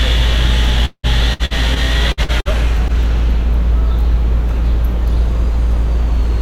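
From 0.85 to 2.92 s there's a stretch of repeated packet loss, and you can hear the robotic sound it leaves behind. Audio packets kept going missing or arriving late, and each hole got papered over by stretching out the last bit of sound before the next gap hit. About a quarter of that span is concealment rather than real signal, with the longest hole around 180 ms, so it comes across as choppy, with pieces missing.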